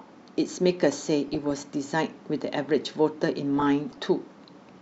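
DAB burbling occurs from 1.28 to 1.51 s and again from 3.57 to 4.05 s. It sounds like burbling blips over the speech. Bit errors from weak reception slipped past error correction into the MP2 data, so wrong samples put short blips of noise into individual sub-bands. The bursts suggest about a dozen and then about two dozen damaged frames, at an error rate well under one percent. This burbling comes in bursts and has no gaps or mutes.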